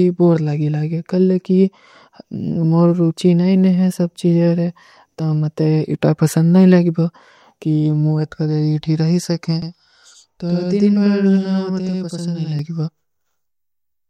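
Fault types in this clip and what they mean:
Channel delay (doubling): from 9.62 to 12.59 s one channel runs 93 ms late, fitting a 4096-sample buffer, so the mono sum adds an equal-level slap echo.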